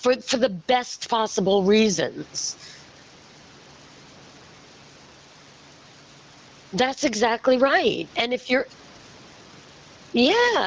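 Throughout the clip, the microphone gain is likely set far too high, so a fast limiter clamps down on each loud syllable. This gain pumping swings the level around 15 dB and squashes the speech flat.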